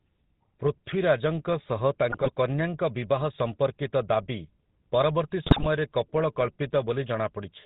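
From the start, the whole clip carries the sound of the GSM full-rate codec, plainly audible as a buzzy, gravelly roughness on the speech and a band limit at 4 kHz, which fits a 13 kbps full-rate stream. The codec reduces speech to a vocal-tract filter excited by a sparse, regularly spaced pulse train, so fine detail in the excitation is lost and the result sounds coarse and synthetic throughout.

From 2.12 to 2.32 s the first burst of GSM bit errors appears. Corrupted bits reach the decoder, so filter, pitch and gain parameters are decoded wrongly for a run of frames, consistent with about ten 20 ms frames. The speech breaks into squawks and gargling with sudden level jumps. A second burst at 5.46 to 5.67 s sounds harsher and more broken, which points to a noticeably higher error rate on the link.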